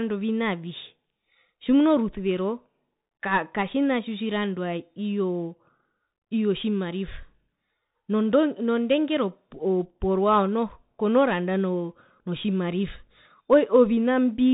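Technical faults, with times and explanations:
Throughout, Bluetooth CVSD headset codec: the speech is cut off above 3.8 kHz, giving a narrow, boxed-in sound. Coding damage is plainly audible, consistent with one-bit up/down coding at an adapting step size, which fits a 64 kbps headset link.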